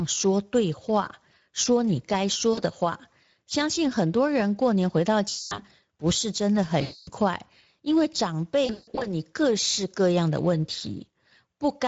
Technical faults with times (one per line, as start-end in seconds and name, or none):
0.00-11.88 Speex codec
2.53-2.60 VoIP packet loss concealed by the speech codec
5.29-5.63 VoIP packet loss concealed by the speech codec
6.81-7.10 VoIP packet loss concealed by the speech codec
8.65-9.08 VoIP packet loss concealed by the speech codec